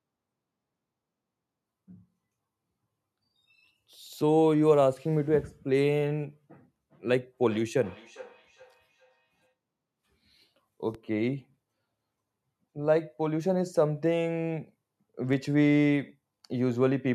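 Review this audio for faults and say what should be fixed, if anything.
From 7.32 to 9.54 s there is feedback echo between two devices. A second device in the room plays back what this microphone sent, and the microphone picks it up again. Each canceller only removes its own playback, so the sound returns at a fixed spacing of roughly 0.4 s, peaking at about 23 dB below the speech. On a spectrogram this shows as faint copies of each syllable's harmonic pattern, evenly spaced to the right. Preventing it means muting the second device or using headphones.

A DC step starts at 10.95 s. The waveform's zero line jumps to an offset, which is gone by 15.33 s. Each jump gives a low thump while the speech continues unchanged. In the waveform the whole trace sits visibly shifted off centre after the step, with an abrupt edge at its start. On a spectrogram each step is a brief broadband smear concentrated at the very lowest frequencies. 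A DC-blocking high-pass filter before recording would prevent it.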